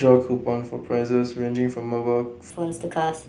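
Right from the start, between about 0.05 and 0.91 s, you get automatic gain falling. The AGC decided the input was too hot and eased its gain down by about 4 dB over that stretch. The opening comes in loud, then the whole thing sinks, with the background dropping right along with the speech. That's the giveaway that it's gain riding and not the talker backing off.

From 2.5 s to the end there's a section at the wrong speed. It's running 1.37 times faster than it should, so speed and pitch jump together at that point and the speech turns hurried and noticeably higher, up by something like five semitones. The likely cause is that this part got played or edited against the wrong clock, for instance a sample-rate mismatch where the audio was read at a higher rate than it was recorded.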